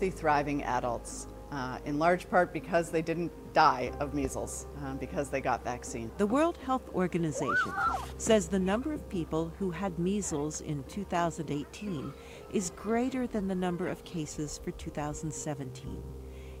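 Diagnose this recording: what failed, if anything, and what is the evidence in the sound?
A steady buzz with a layer of hash above it runs under the audio for the whole clip, sitting roughly 25 dB below the programme. Its fundamental is 75 Hz, which matches a display's field rate rather than the mains, so this is video or display buzz in the analogue wiring. A screen or video cable is coupling its picture-refresh energy into the audio path, adding a buzz locked to that 75 Hz rate.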